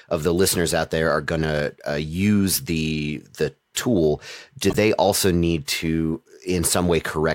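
At 4.70 to 4.76 s, between "the the tool do" and "also need to", a corrupt frame was decoded: flipped bits across a few compressed frames were played anyway, misplacing spectral energy. The result is a brief chirpy noise burst peaking around -15 dBFS.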